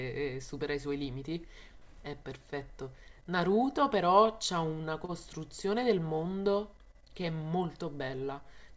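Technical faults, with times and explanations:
5.05–5.11 s: short stall from a late packet. A packet reached the receiver late, the jitter buffer ran dry, and the decoder held the last sound for about 34 ms until the data arrived. Playback then resumed from the same point, so nothing is lost, but that moment is drawn out with a faint buzzy or dipping texture, and everything after it sits 34 ms later. The call path's band limit, nothing above 8 kHz, consistent with a wideband codec such as G.722, is present throughout.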